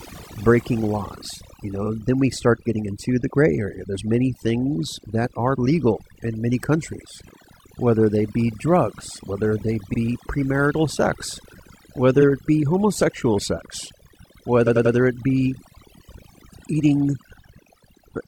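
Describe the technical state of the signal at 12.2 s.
Around 12.17 to 12.23 s the speech stutters as a slice of about 46 ms plays twice in a row. These are repeated frames: a block of compressed audio was written or sent more than once, so the decoder replays it and the clip grows by 46.4 ms.

Underneath, as throughout the clip, the background drops and breaks into twinkling, warbling specks. This is overdone noise removal: a reducer set too strong pushes individual frequency bands down or off whenever they sit near its noise estimate, and quiet parts of the voice are lost along with them.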